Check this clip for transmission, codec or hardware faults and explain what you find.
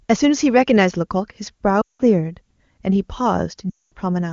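Two lost AMR speech frame dropouts occur, from 1.81 to 2.01 s and from 3.70 to 3.94 s. Each time, the sound drops to near silence within two frames and then returns briefly weak or rough. Radio errors corrupted runs of frames, about 180 ms and 220 ms, which fits nine and eleven 20 ms frames. The decoder then padded the gaps by repeating the last good pitch and vocal tract settings at falling gain. Outside the gaps, the AMR wideband (HD Voice) codec sounds clean, which fits its highest rate.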